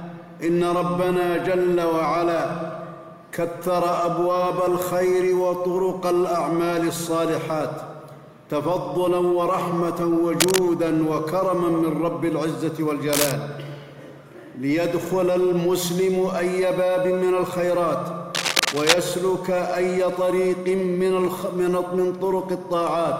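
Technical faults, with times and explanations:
10.40–10.60 s, 13.13–13.32 s and 18.34–18.94 s, cable scratch noise: dense, ragged bursts of scratching and rustling, roughly as loud as the sound itself, the last one longest. Likely a worn cable or connector shifting, its contact resistance fluctuating rapidly.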